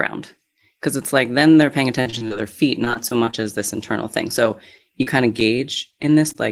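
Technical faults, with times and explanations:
2.01–2.32 s, 2.84–3.45 s and 5.02–6.36 s: repeated packet loss (robotic sound). Right after "like then they're paying" and again before "this internal thing", holes up to 39 ms arrive in quick succession. Each is filled by extending the previous sound, making the speech choppy.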